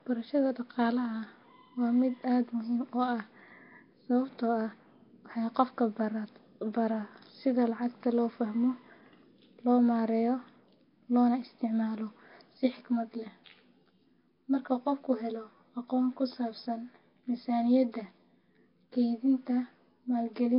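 From start to finish the speech has a rough, hissy halo and a smeared, underwater quality, with heavy codec damage that likely comes from Nellymoser compression at around 22 kbps.

From 12.58 s, right after "loona isticmaalo", to the end, channel delay (comb filtering) makes the sound hollow or slightly doubled. A copy roughly 10 ms late, summed to mono, cuts notches starting near 40 Hz.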